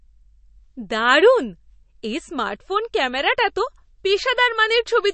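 Speech with MP3 compression damage throughout: plainly watery, swirly sibilants, a hard ceiling at 8.3 kHz, and flickering spectrogram holes, likely from a low bitrate around 35 kbps.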